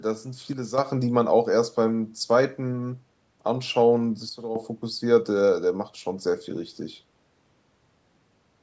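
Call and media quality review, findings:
Sudden gain jumps at 0.53 to 0.78 s and 4.29 to 4.56 s: speech and background noise drop together by about 8 dB, then about 12 dB, with abrupt edges. Likely a gain setting or bit shift applied without a ramp. Call mic chain band-limits everything above 8 kHz.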